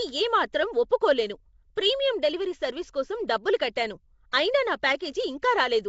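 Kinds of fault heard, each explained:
Nellymoser compression: plainly audible rough, hissy halo and smeared underwater tone, nothing above 7.7 kHz; likely a Flash codec filling starved bands with noise.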